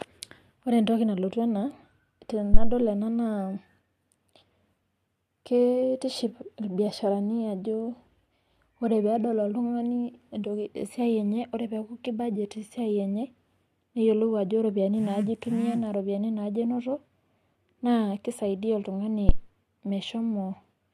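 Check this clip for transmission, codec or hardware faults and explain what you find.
Two phantom power thumps, at 2.54–2.79 s and 19.29–19.42 s, decaying over about 56 ms and 29 ms. A supply switching on the live input sends a step through the coupling capacitors. Each sounds as a deep thump, a large low-frequency waveform swing and a dark band at the bottom of the spectrogram.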